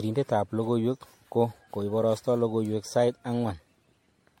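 A short speech recording with generation loss throughout. The sound is swirly and hollow, consonant attacks are smeared, and nothing is present above 16.5 kHz. The damage is heavier than a single low-rate encode would produce, which fits a 64 kbit/s MP3 stream that has likely been decoded and re-encoded around seven times. Each pass requantises on a shifted frame grid, so noise and spectral gaps accumulate rather than cancel.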